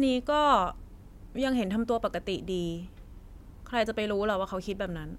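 No faults can be heard anywhere in the recording.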